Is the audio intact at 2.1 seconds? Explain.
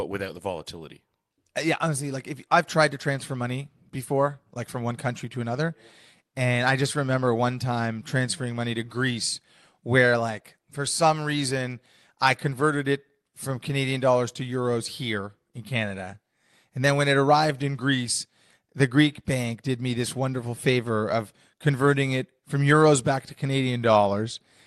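Yes, at 2.1 seconds the speech plays through without any dropout, click or distortion, carried by the call path's Opus coding with its band limit near 12 kHz.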